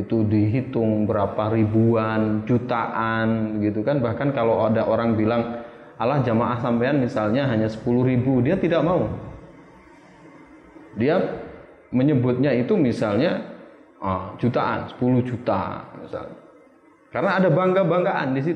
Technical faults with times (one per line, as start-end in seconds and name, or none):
none